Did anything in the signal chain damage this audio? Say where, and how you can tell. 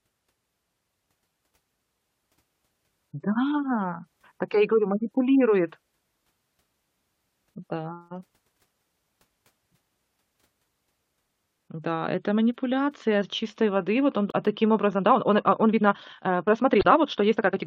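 Yes. The compressed stream carries damaged data, so the fault sits at the codec or storage stage. It appears twice: from 14.28 to 14.34 s, between "чистой воды вот он" and "а таким", and from 16.79 to 16.85 s. Each time the decoder loses frame sync and hunts for the next header, producing a brief glitch.

From 14.92 s, just after "вот он а таким", to the end, the speech runs about 1.52 times faster at an unchanged pitch. This time-stretched section was likely produced by editing software fitting the audio to a length by dropping short segments, which makes it rushed.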